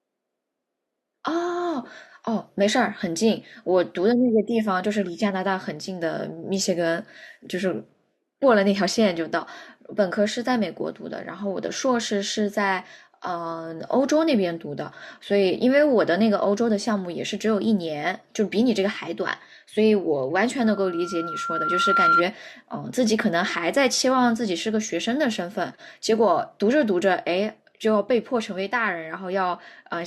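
From 20.60 to 22.24 s, loudspeaker feedback squeal: a 1.4 kHz loop resonance swells over about a second and a half to roughly 5 dB above the speech, showing as a brightening horizontal spectrogram line.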